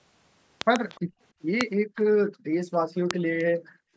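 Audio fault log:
0.61–0.78 s, 1.61 s, 3.11 s: loud pop. A pair of sharp pops at 0.61–0.78 s, then single pops at 1.61 s and 3.11 s, about 20 to 25 dB above the speech, which continues underneath. They likely come from a voltage spike such as a switch, plug or static discharge. On the waveform each is a tall narrow spike, and on the spectrogram a thin vertical stripe spanning all frequencies.
0.89–1.01 s, 3.38–3.44 s: echo leak. Brief, faint scraps of the speech return about 0.3 s late, roughly 25 dB and then 30 dB below the direct sound. This is likely residual loudspeaker pickup that the far end's echo canceller failed to remove. The spectrogram shows a weak, smeared copy of earlier speech patterns shifted in time.
1.01–1.2 s, 1.84–1.96 s, 2.3–2.53 s, 3.58–3.94 s: background gated by the echo canceller. The room sound drops out for 0.1 to 0.4 s, by about 26 dB at first and about 40 dB afterwards, because the canceller clamps the microphone while the loudspeaker plays. 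The waveform's noise floor collapses to near silence, and the spectrogram shows dark blank patches.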